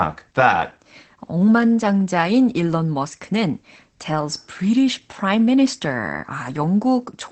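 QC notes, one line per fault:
Throughout: Opus voice compression in SILK wideband mode. Nothing above 8.4 kHz, and coarsely coded excitation leaves the speech muffled and hoarse, which fits about 12 kb/s.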